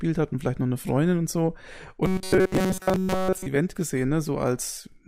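From 2.06 s to 3.47 s, just after "und so", the speech turns into a rigid, metallic buzz pinned at about 188 Hz, still loosely tracing the syllables. This is robotic sound from repeated short buffers: the likely cause is audio arriving too slowly, so the player loops the last fragment, around 5.3 ms, over and over. Roughly two thirds or more of that stretch is repeated material rather than real audio.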